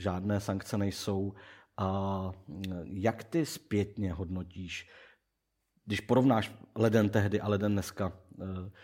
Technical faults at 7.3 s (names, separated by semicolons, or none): none